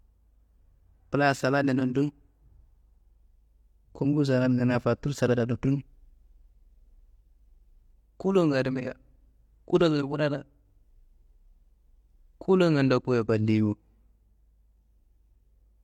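No technical faults can be heard at any point in the recording, so there are none to describe in time order.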